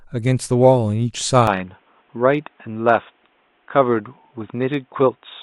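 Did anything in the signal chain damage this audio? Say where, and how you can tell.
Yes. From 1.47 s the speech dulls abruptly, with nothing above 3.8 kHz and faint new noise. The input likely switched to a poorer device.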